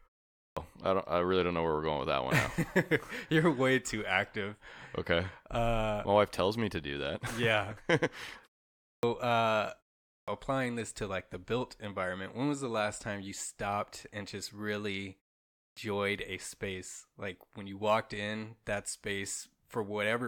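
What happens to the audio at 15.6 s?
At 15.56 s there is a clipped start after a pause. The output device dozed off during the 0.43 s silence and took time to wake. The first 0.21 s of speech, until 15.77 s, is swallowed. The speech bursts in abruptly, missing its opening sounds.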